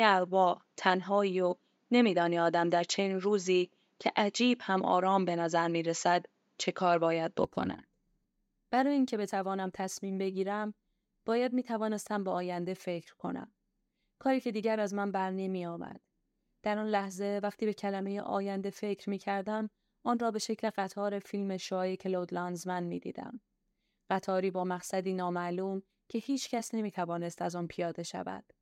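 Input switched to a poorer device, from 0.0 to 7.45 s: the opening stretch of speech has nothing above 7.6 kHz, so it sounds duller and boxier than what follows. At 7.45 s the sound opens up cleanly with no gap, a modest level change and a shift in background noise, though that noise sits far below the speech. The likely cause is the recording starting on a narrower-band input before switching to the main microphone.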